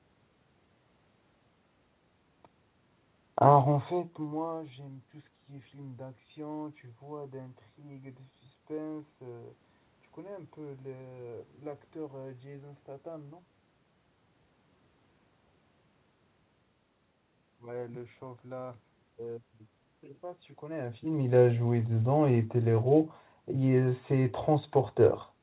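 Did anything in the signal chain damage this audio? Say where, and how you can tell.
No, the signal chain left this speech undamaged: the band stops at 4 kHz, as expected for a narrowband call path consistent with 64 kbit/s G.711 A-law, and the level shifts around 3.5 s and 20.5 s come from the talker moving relative to the microphone rather than from any stage of the chain.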